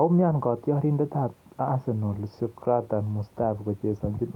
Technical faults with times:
none

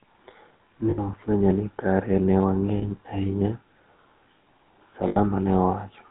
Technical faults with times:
0.00-6.10 GSM full-rate codec
0.90-0.99 lost GSM frames
2.78-2.83 lost GSM frames
5.08-5.17 lost GSM frames

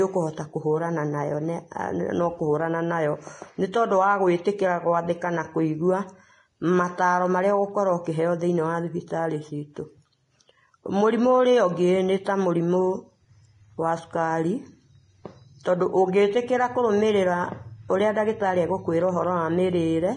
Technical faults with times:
0.00-20.16 Vorbis compression

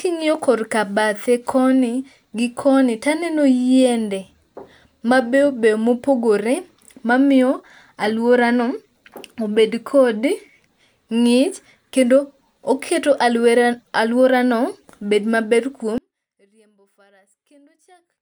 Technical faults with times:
15.98-18.21 audio dropout to a faint residue

